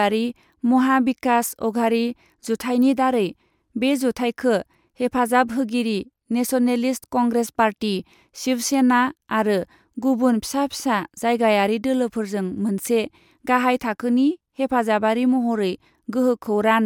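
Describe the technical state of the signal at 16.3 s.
The signal at 16.3 s is intact, with no audible fault at that point.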